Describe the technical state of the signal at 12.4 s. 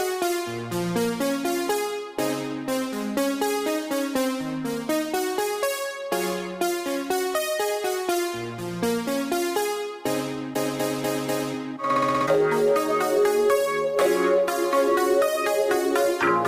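At 12.4 s the signal is intact, with no audible dropout, distortion, clicks or other technical fault at that point.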